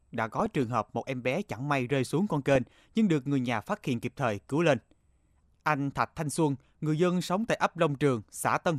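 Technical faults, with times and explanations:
0.40–0.63 s and 2.49–2.67 s, DAB burbling: short blips of noise over the speech. Weak-reception bit errors corrupt samples and scale factors, putting noise blips in single sub-bands and making sub-bands jump in level for up to a frame.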